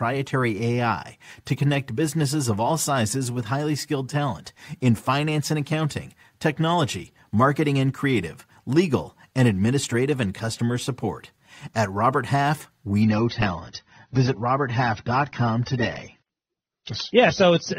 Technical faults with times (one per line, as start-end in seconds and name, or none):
13.02-17.78 adaptive stream at a lower bitrate